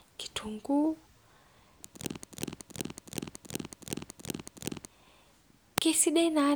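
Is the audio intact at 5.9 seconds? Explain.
Yes, at 5.9 seconds the speech runs through intact, with no audible dropout, click or other fault at that moment.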